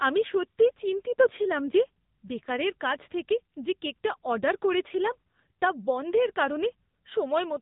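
Speech heard through the AMR narrowband mobile codec throughout: nothing above 3.8 kHz, with buzzy, synthetic voicing that fits roughly 8 kbps, unlike a plain band-limit, which stays natural.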